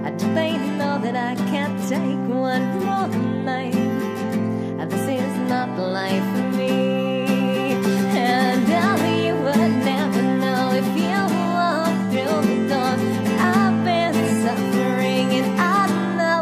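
Nothing in the audio stood out as a technical fault on listening.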